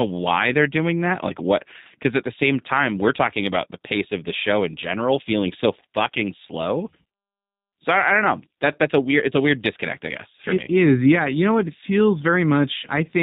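Throughout, the speech has passed through a low-bitrate VoIP coder, the sound pointing to G.729 at 8 kbit/s. The coder models each 10 ms frame with a vocal tract filter, pitch prediction and sparse pulses, removing everything above 4 kHz and leaving plainly audible rough, synthetic buzz.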